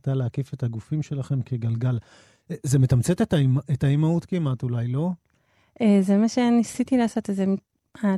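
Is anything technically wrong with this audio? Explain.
No, nothing technically wrong can be heard here.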